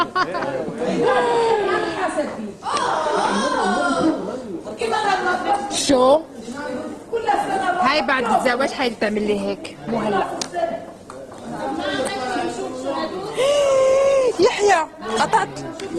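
At 4.69 s the audio switches abruptly to a lower-quality version and stays there through the end. This is an adaptive stream at a lower bitrate: the player, facing a slower connection, moved to a leaner encoding, and the sound points to Opus dropping from about 64 to 16 kbit/s. Codec artefacts grow coarser. Unlike packet loss or a dropout, there is no gap or glitch, just a clean, sustained step down.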